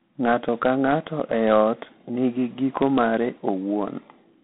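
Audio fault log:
Throughout, G.726 ADPCM: the speech carries a harsh, rasping hiss that swells and fades with its level, inside a narrow telephone band with nothing above about 3.9 kHz. Coding each sample as a coarse difference from a prediction leaves this grain, which fits 24 kbit/s.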